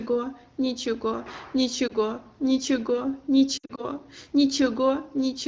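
Speech carried over AMR wideband (HD Voice), with lost AMR speech frames at two points. Around 1.88 to 1.94 s a brief warble suggests a single failed frame. From 3.58 to 3.85 s, losses scattered over about 200 ms, with the longest run near 60 ms, give dropouts that fall to near silence. Unlike a hard packet-loss gap, the decoder bridges the missing frames by repeating the last pitch and vocal-tract settings at falling gain, so the sound fades rather than cutting out.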